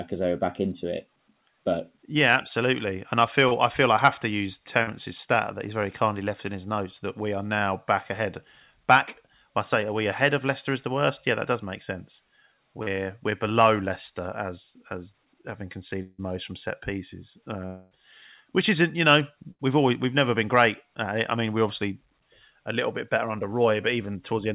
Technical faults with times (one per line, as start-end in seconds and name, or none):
3.48-3.54 short concealed packet loss
4.83-4.90 short concealed packet loss
12.83-12.89 short concealed packet loss
16.02-16.21 long network dropout
17.66-17.94 long network dropout
19.51-19.62 burst of packet loss